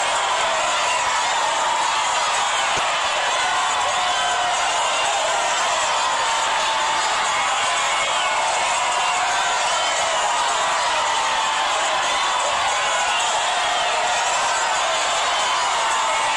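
DAB burbling appears from 2.76 to 2.86 s and again from 8.00 to 8.14 s. Weak reception lets residual bit errors, around 0.1 to 0.15 percent, reach the MP2 data. Corrupted samples put brief blips of noise into single sub-bands, and corrupted scale factors make sub-bands jump in level for up to a frame.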